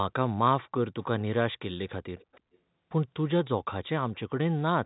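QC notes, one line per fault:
1.88–1.94 s and 2.19–2.58 s, echo leak: a faint delayed copy of the speech slips in 317 ms behind, first a short scrap about 25 dB down, then a longer stretch about 30 dB down. That's likely an echo canceller at the loudspeaker end letting its mic pickup back through.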